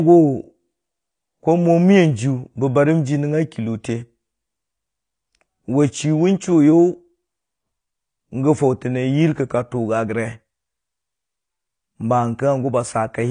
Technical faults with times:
0.00-13.31 low-bitrate audio saved at a high bitrate
1.39-10.94 clock drift buffer slips

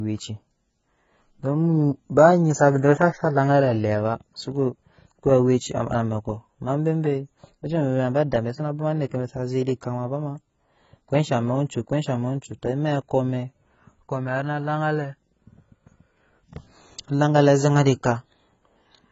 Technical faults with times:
0.00-19.12 AAC compression

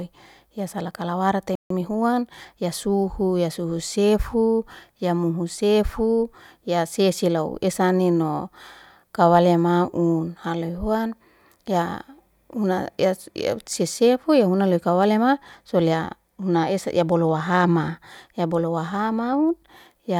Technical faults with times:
1.55-1.70 playback stall
1.70-2.68 time-compressed catch-up

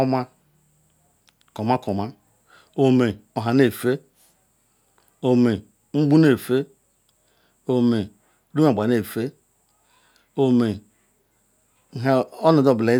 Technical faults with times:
none

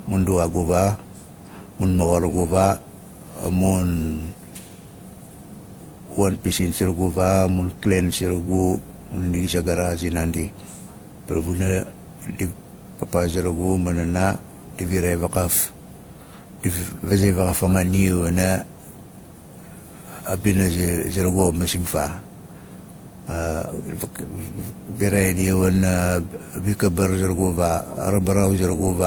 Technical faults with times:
0.00-29.06 transcoding between lossy codecs

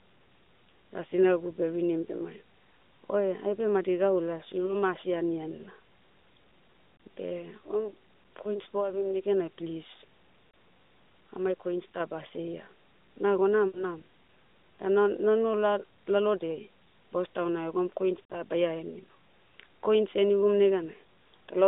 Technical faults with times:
4.66-4.77 lost AMR speech frames
6.96-7.00 lost AMR speech frames
10.50-10.54 lost AMR speech frames
11.37-12.00 sudden gain jump
13.68-13.85 lost AMR speech frames
18.28-18.40 lost AMR speech frames

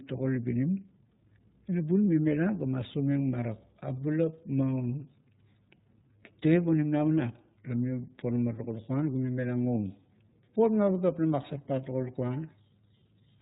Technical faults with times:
0.00-13.41 iLBC codec

